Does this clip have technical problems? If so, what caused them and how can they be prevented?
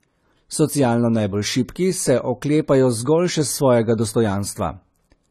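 Yes. AAC compression affects the whole speech clip: nothing sounds above 14 kHz, and the codec damage is plainly audible. The likely cause is an AAC-LC encoder quantising each frame's spectrum coarsely to save bits and cutting the top band, which fits roughly 32 kbps. Encoding at a higher bitrate, or delivering an uncompressed or lossless copy, would prevent it.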